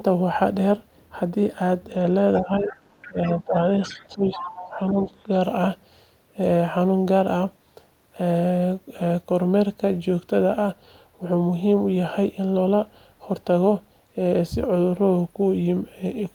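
From 2.35 to 3.43 s a second voice sits faintly under the main talker, roughly 20 dB down. This is other side's voice leaking through, likely because the far end is playing on a loudspeaker and the echo canceller is leaving a residue in the microphone signal. It returns from 3.9 to 5.23 s, louder this time at around 15 dB below the speech, so it is more clearly audible as a competing voice.

Overlapping those stretches, the main talker's level drops in pieces: from 2.41 to 2.73 s by around 10 dB, from 3.08 to 3.55 s by around 15 dB, and from 3.87 to 5.31 s by around 10 dB. The dips total a few hundred milliseconds in the first two spans and well over half a second in the last. This is speech suppressed in double talk. The likely cause is the canceller failing to separate the near talker from the echo while both are active, and attenuating both together.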